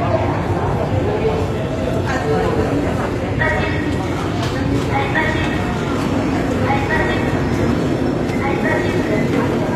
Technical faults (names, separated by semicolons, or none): HE-AAC compression